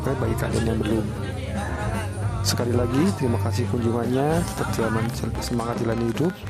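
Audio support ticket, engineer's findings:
Train of clicks, 4.83 s to 6.48 s, running to the end. Ticking and popping over the audio at about 10.9 clicks per second, spaced unevenly. Around twenty clicks, near-identical in shape, peaking a few dB above the programme. Likely cause: interference pickup from nearby equipment or a faulty connection or power supply injecting repeated pulses into the signal path. Check cabling, grounding and the interface.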